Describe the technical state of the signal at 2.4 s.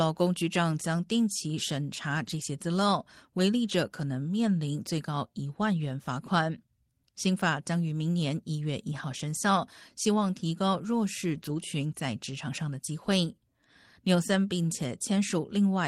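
At 2.4 s the speech is at the end of a lost packet rebuilt from error correction, spanning 2.23 to 2.41 s. Following packets carried low-bitrate copies that the decoder played, so nothing drops out. The rebuilt stretch, about 100 ms, sounds rougher and noisier.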